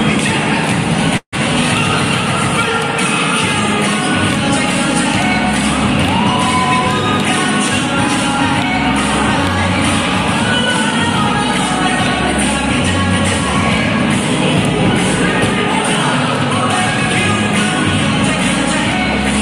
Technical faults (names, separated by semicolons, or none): call audio freeze